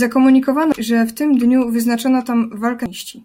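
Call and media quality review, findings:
Damaged data in a compressed stream, two brief glitches in the speech at 0.72 s and 2.86 s. Probable component: decoder input. Corrupted bytes in the coded stream make frames misread or rejected; the decoder loses sync and hunts for the next frame header.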